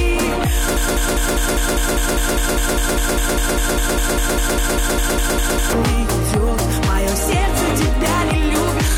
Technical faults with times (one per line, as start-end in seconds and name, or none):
0.77-5.73 broken-record loop